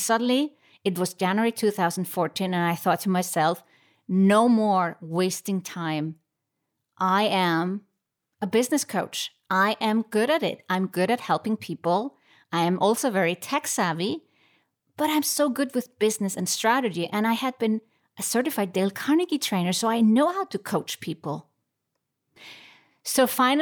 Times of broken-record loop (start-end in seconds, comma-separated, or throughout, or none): none